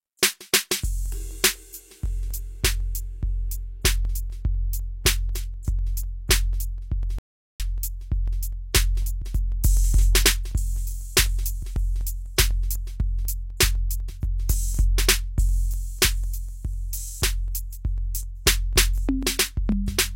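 Periodic USB or driver dropouts run from 0.06 to 19.97 s. Every 0.25 s about a millisecond of the music is skipped, giving roughly seventy evenly spaced ticks.

A playback stall at 7.19 s cuts the music to silence for 0.41 s, likely because the player ran out of data or its thread was blocked.

Pre-echo appears at 13.57 to 13.59 s. The codec spread its quantisation noise across the block, so a 25 ms hiss comes before a sharp attack, which sounds smeared.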